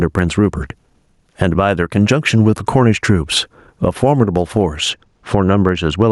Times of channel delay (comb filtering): 4.90-6.12

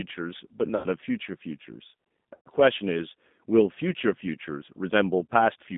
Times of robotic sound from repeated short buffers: none

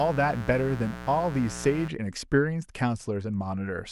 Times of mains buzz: 0.00-1.89

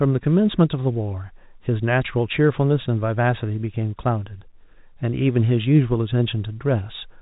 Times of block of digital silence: none

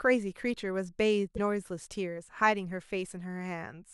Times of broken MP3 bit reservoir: 1.35-1.39

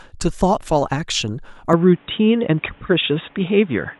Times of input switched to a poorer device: 1.73-4.00

